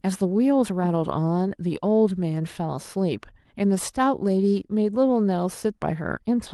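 No faults heard in the speech; the top end rolls off around 12 kHz, consistent with an Opus call path set to that bandwidth.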